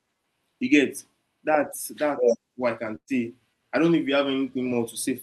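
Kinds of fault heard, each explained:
Burst of packet loss: Just after "that's what I can", at about 2.95 s, a run of speech packets went missing or came too late to play. The receiver covered the hole by extending the last sound for roughly 117 ms and turning it down. That fill fades into about 70 ms of near silence. Speech returns at about 3.10 s. Around 120 ms of the original speech is simply gone.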